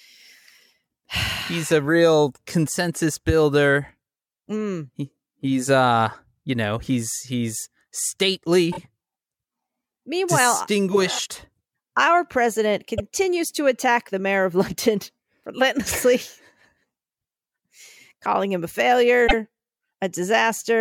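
At 8.71 s, 12.97 s (before "to attack the mayor") and 19.27 s (after "calling him a"), repeated frames replay 26 to 78 ms blocks as a stutter, visible as duplicated slices on a spectrogram.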